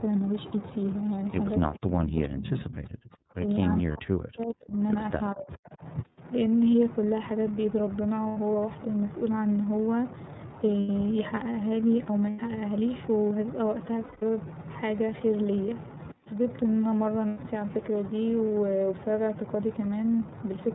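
Speech coded with iLBC throughout, so nothing above 4 kHz survives and the voice has a slightly rough, synthetic edge. The plainly audible coding damage and the 30 ms frame structure fit the 13.33 kbps mode. From 1.77 to 3.41 s, 3.80 to 4.75 s and 5.34 to 5.82 s the voice is pushed down by as much as about 40 dB in the first two stretches and about 25 dB in the third. This is likely speech suppressed in double talk, where an echo canceller confused the talker with far-end echo and attenuated both. Lost iLBC frames appear at 3.93 to 3.96 s, 8.28 to 8.38 s, 10.80 to 10.89 s, 12.30 to 12.40 s, 14.04 to 14.23 s and 17.28 to 17.41 s, with gaps of 30 to 180 ms. The decoder fills each gap by repeating the last pitch cycle with added noise, giving a brief buzzy, held vowel before clean decoding resumes at the next intact frame.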